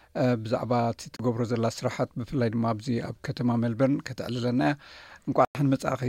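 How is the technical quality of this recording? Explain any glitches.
There are two brief holes in the sound, at 1.16 to 1.19 s (29 ms) and 5.45 to 5.55 s (about 100 ms). These are likely Bluetooth dropouts: the audio cuts out and then picks up further along, as if it had kept playing during the gap.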